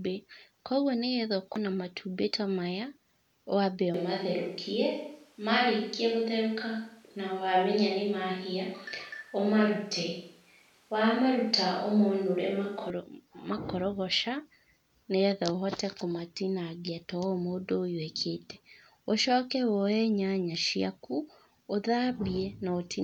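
Just after "matumbĩ ta maya wambe", from 3.94 to 12.90 s, the speech turns roomy and thin. This is likely a switch to a distant microphone.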